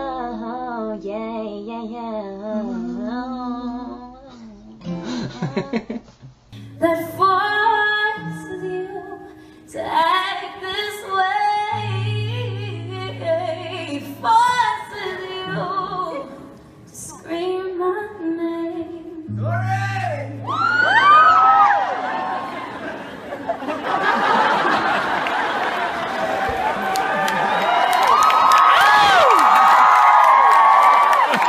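No technical faults can be heard anywhere in this audio.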